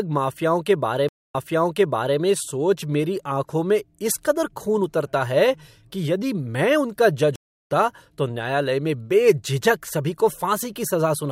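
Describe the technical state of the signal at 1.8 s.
A stream reconnect spans 1.09 to 2.19 s: after a 0.24 s dropout, a fresh decoder restarts the speech about 0.86 s earlier, replaying audio before "में सोच".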